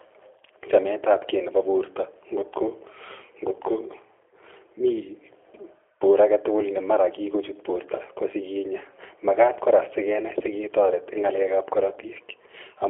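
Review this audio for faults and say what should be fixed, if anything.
The G.729 codec damage runs through the whole clip and is plainly audible. The speech is confined to roughly 150 Hz to 3.4 kHz with nothing above 3.5 kHz, and it sounds rough and synthetic because each 10 ms frame is rebuilt from a vocal tract filter, a pitch predictor and a few pulses. This fits an 8 kbit/s G.729A stream. To prevent it, carry the call on a wideband codec such as G.722 or Opus instead of G.729.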